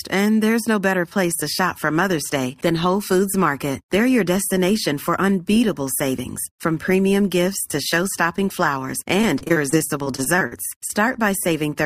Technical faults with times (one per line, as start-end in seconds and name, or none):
9.21-10.91 repeated packet loss (robotic sound)